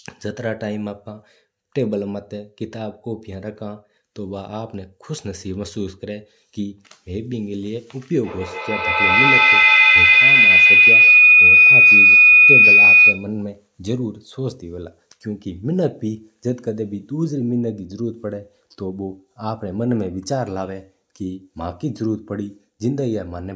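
From 8.23 s to 13.38 s a feedback howl builds up. Two devices in the same room form a loop, and each pass gains level. The tone narrows to around 3 kHz, with the loop repeating roughly every 150 ms. At its peak it is about 12 dB above the speech.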